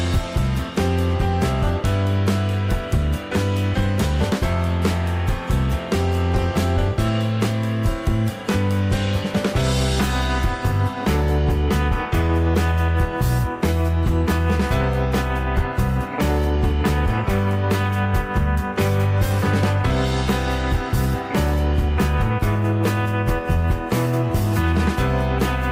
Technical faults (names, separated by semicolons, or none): none